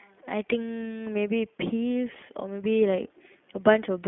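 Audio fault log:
Throughout: iLBC codec. The speech sounds narrow and slightly rough, with a synthetic edge that is plainly audible. Nothing above 3.7 kHz remains. Each 20 ms frame is coded independently at about 15.2 kbps, trading smoothness for robustness.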